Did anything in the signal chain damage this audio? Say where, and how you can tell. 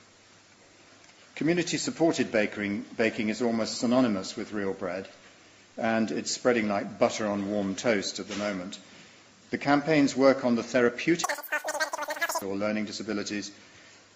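Yes. A wrong sample rate at playback, 11.24 to 12.42 s. The sound runs three times fast, pitched 19 semitones up. That fits 16 kHz audio played at 48 kHz without conversion.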